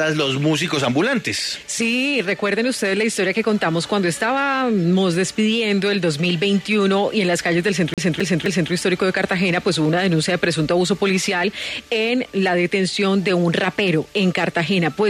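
A CD stuck on one turn appears from 7.94 to 8.72 s: the laser is knocked back one track at the same point on each rotation, so a 260 ms slice of sound plays three times over, each return marked by a brief mute, giving a quick, evenly spaced stutter.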